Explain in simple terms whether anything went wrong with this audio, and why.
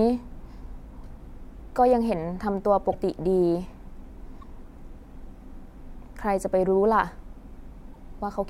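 Three quick glitches, at 2.91–2.94, 4.40–4.43 and 7.93–7.96 s, where the speech jumps ahead. That's likely a broken MP3 bit reservoir: after chunks were lost, each next 26 ms frame reached back for borrowed data and got the wrong bytes.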